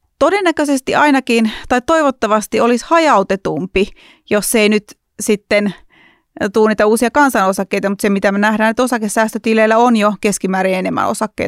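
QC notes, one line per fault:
No faults were heard anywhere in this speech recording. There is nothing to log for it.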